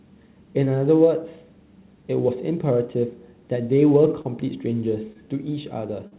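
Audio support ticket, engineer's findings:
Short stall from a late packet, 4.21–4.27 s and 5.12–5.18 s. Jitter buffer ran dry; receiver held the last sound about 31 ms and 28 ms, then resumed in place. Nothing lost, audible drag and faint buzz or dip, delay grew each time.

Short concealed packet loss, 6.07–6.14 s. About 40 ms never reached the decoder; concealment extended the preceding sound, then crossfaded back. Brief smear or wobble, a short consonant may drop. Band stops at 4 kHz, consistent with G.711 narrowband path.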